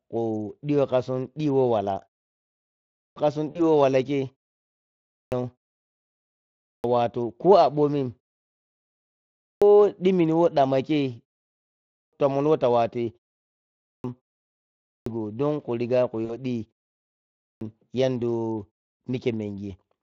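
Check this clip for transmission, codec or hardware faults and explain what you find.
Two faults are present in this speech: repeated clipped starts after pauses, and two short gaps filled by the speech codec's packet-loss concealment.

The clipped start after a pause occurs at 2.57, 4.70, 6.24, 9.00, 11.48, 13.45, 14.43 and 16.97 s. The last one before "don khu riga khu" is at 14.43 s. Each time, roughly 0.59 to 0.65 s of the opening sound is missing, following pauses of 0.3 to 0.9 s. The output device drops into a low-power state during silence and takes that long to wake again. As a result, phrases start abruptly, already partway in.

VoIP packet loss concealed by the speech codec occurs at 3.51 s and at 16.25 s, the second just after "don khu riga khu". Each event covers about 40 ms, which fits two consecutive 20 ms frames going missing. The decoder fills the gap by extending the last pitch and spectral shape at falling gain. 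The result is a brief stretched, fading fill of buzzy tone or coloured noise. Because each frame builds on the one before, the speech stays weak or distorted just after the gap.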